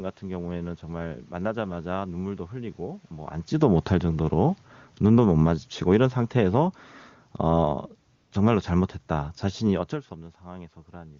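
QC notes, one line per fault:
3.48 to 6.74 s and 7.35 to 10.02 s, automatic gain falling: the level sinks gradually in two stages, by about 6 dB across the first span and about 3 dB across the second, and the room background drops along with the speech. That shared drop marks it as the gain control reacting to input it judged too loud or too noisy and backing its gain off over several seconds, rather than the talker shifting position. That movement happens near 3.0 s and 9.5 s and alters only the direct sound.
8.15 s to 8.31 s, AMR comfort noise: for 160 ms the natural room background gives way to a smooth, steady hiss that cuts in and out abruptly. The phone took this stretch for silence and stopped sending speech frames, so the receiver synthesised noise from a rough description of the background's level and spectral shape. Elsewhere the AMR-WB wideband coding at 23.85 kbit/s leaves no damage, or only faint damage.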